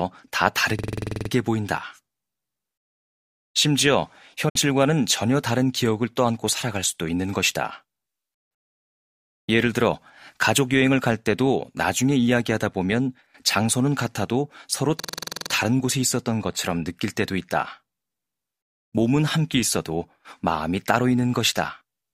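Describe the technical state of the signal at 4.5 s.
At 4.5 s the speech has a brief dropout from AAC frame loss with muting, spanning about 4.49 to 4.56 s. Compressed frames were lost, and the decoder filled the missing spectral data with zeros. The overlapping transform windows then fade the signal down into silence and back up. The result is a soft-edged hole of about 64 ms, consistent with roughly three lost AAC frames, where the speech briefly vanishes and returns.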